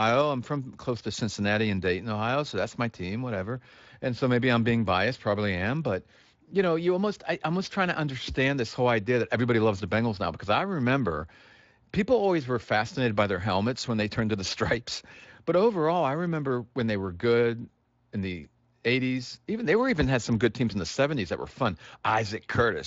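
No technical faults are present, and the signal's content stops at about 7.6 kHz, consistent with the light band limiting of a wideband speech codec.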